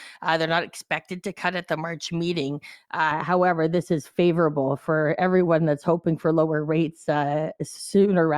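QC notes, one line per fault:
3.11 to 8.38 s, de-emphasis applied wrongly: from about 3.11 s the speech suddenly goes dull and muffled and stays that way to the end. A treble cut meant to undo pre-emphasis has been applied to audio that didn't need it, or applied a second time, so the highs roll off smoothly, ending up about 11 dB down at 10 kHz relative to 1 kHz. The sibilance and air just sink away.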